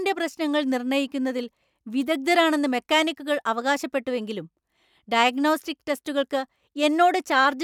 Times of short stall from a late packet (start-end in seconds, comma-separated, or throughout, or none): none